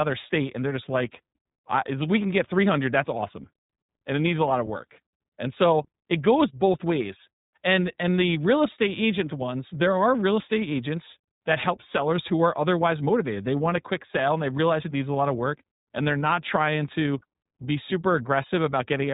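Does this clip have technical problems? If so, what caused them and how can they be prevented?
Yes: iLBC codec damage throughout, with nothing above 3.8 kHz and a plainly rough, synthetic texture from independently coded short frames, consistent with 20 ms frames at 15.2 kbps. Prevent it by sending or recording the speech through a wideband codec instead.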